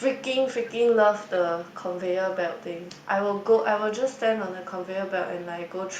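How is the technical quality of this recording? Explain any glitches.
A faint delayed copy of the speech recurs through the recording. This is echo leak, heard at 0.18 to 0.22 s, 0.63 to 0.72 s, 1.27 to 1.99 s, 2.33 to 3.61 s and 4.14 to 5.88 s. The copy trails the speech by 265 ms. It sits well below the main signal, roughly 25 to 35 dB down. It comes and goes in short scraps and longer stretches. The likely cause is a loudspeaker-side echo canceller letting some of its microphone pickup back into the call.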